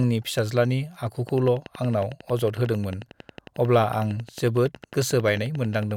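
From 1.29 s to 5.92 s, a train of clicks ticks over the speech at a steady 11 per second, around fifty sharp pulses in all, peaking a few decibels above the voice. Likely interference or a faulty connection; on a spectrogram, evenly spaced thin vertical lines, matching spikes in the waveform.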